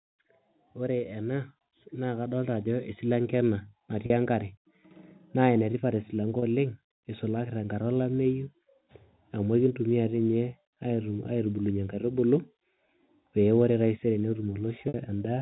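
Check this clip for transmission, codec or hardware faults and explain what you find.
Two kinds of fault show up: a gain rise near the start and three short dropouts patched by pitch repetition, heard through telephone-band coding.

Automatic gain rising, 0.74 to 3.07 s: the gain control lifts the level by about 8 dB, swelling speech and background together. The waveform envelope visibly widens.

Packet loss with pitch repetition at 4.06 s (40 ms), 6.39 s (30 ms) and 14.88 s (60 ms): the receiver loops the last pitch period. The 40 ms and 30 ms gaps sound briefly buzzy and held; the 60 ms one fades into silence before speech returns with a short cross-fade. Each shows as flat, repeating harmonic stripes on a spectrogram.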